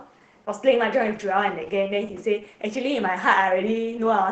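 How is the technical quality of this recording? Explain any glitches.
The quality is limited by audible Opus voice compression throughout the speech. The SILK coder cuts the band to 8 kHz and codes coarsely, as at 12 kbps. Speech sounds muffled, hoarse and slightly robotic.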